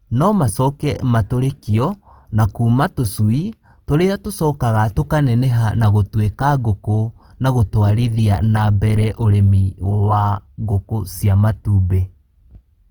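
Throughout, the speech likely passed through Opus compression at a rate suggesting about 24 kbps. Starved bands are noise-filled, leaving the sound plainly grainy and rough.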